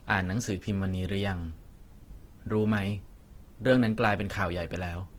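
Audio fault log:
Throughout, Opus compression. The speech sounds rough and grainy across the whole clip, with a plainly audible noisy texture on vowels and sustained sounds. The top end stays open, reaching about 20.2 kHz, so it is not muffled. The likely cause is Opus in its music (CELT) mode running short of bits. Starved bands get refilled with folded or noise content instead of going silent, so tones turn grainy rather than swirling. The damage level fits a rate near 16 kbps.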